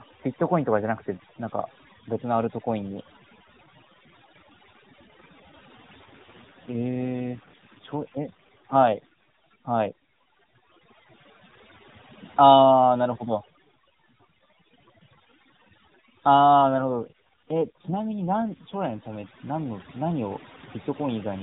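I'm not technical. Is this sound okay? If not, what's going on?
No. Overdone noise removal runs through the whole clip. A cleanup filter set too strong cuts away quiet parts of the voice along with the background noise, and the background breaks up into twinkling, warbling specks.

An AMR rate drop happens from 6.06 to 9.12 seconds and again from 16.62 to 19.01 seconds. On a weak mobile signal, the phone call squeezed the voice into less data, making it rougher and more robotic.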